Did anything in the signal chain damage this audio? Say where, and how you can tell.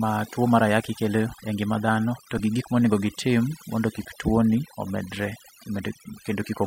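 Yes, two things. The whole clip has overdone noise removal, which sits at the call-processing stage. The background has been pushed down with little twinkling specks in it. That's a noise suppressor set too hard. It shuts off individual frequency bands whenever they sit close to its noise estimate, so the quieter parts of the speech get thrown out along with the noise.

The second one is a corrupt frame decoded, at the codec stage, from 2.37 to 2.40 s. It's a short glitch lasting about one compressed frame, peaking at about -20 dBFS. The length tells you it's codec-side. Some bits in that frame got flipped, and the decoder played it anyway. The misread gains and codes dumped energy at the wrong frequencies for just that frame's length.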